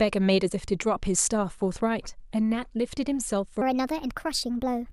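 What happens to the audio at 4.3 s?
At 4.3 s the speech is inside a section at the wrong speed. It runs from 3.62 s to the end of the clip. It plays 1.31 times too fast, likely from being fitted to the wrong clock. Pitch rises about five semitones, and everything sounds hurried.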